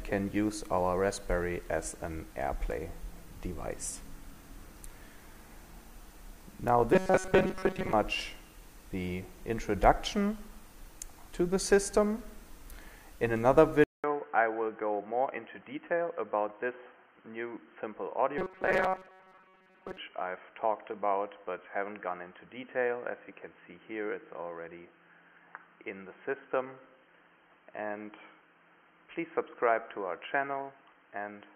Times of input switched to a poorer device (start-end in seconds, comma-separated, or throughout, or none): 13.84-31.55